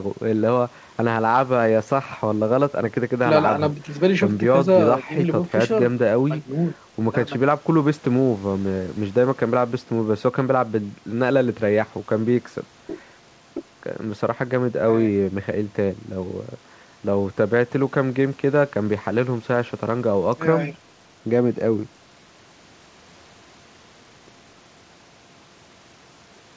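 No faults; the speech is band-limited at 8 kHz, consistent with a wideband G.722 call path at 64 kbps, and nothing else stands out.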